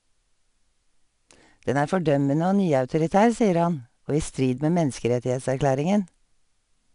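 Throughout the speech, 4-bit ADPCM compression adds gritty level-tracking hiss, seen as broadband haze under voiced energy, with nothing above 10.6 kHz, which fits roughly 88 kbps.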